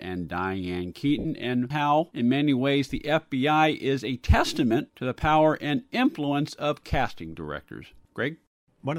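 At 1.19 to 1.25 s, lost LE Audio frames leave a roughly 60 ms gap, which fits six 10 ms frames. The decoder fills it by replaying the last spectrum with random signs, then fading it. The speech smears into a brief noisy hiss that softens just before "and how in many".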